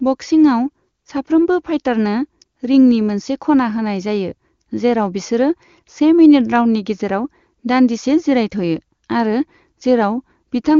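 No technical faults are audible.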